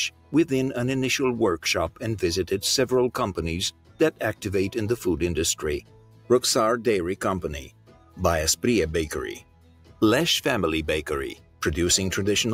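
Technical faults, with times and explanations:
Throughout: noise suppressor applied to music or sounds. A speech-tuned suppressor treats steady parts as noise. Level swings by roughly ten decibels, so the sound pumps and thins.
0.1–0.33 s, 3.71–4.2 s, 5.81–6.3 s, 7.64–8.19 s, 9.39–10.02 s, 11.35–11.62 s: sound cut by the noise suppressor. Held or fading sound sinks by up to about 12 dB, and its decay is cut short.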